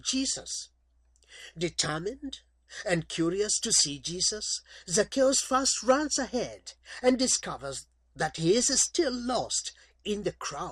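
Throughout, a resampler restarted on every block, likely in a 44.1 to 48 kHz conversion, leaves a small error at each 40 ms block edge. The result is a steady 25 Hz tick that appears only while sound is present. Unlike buffer underruns, nothing drops out and the spacing never varies.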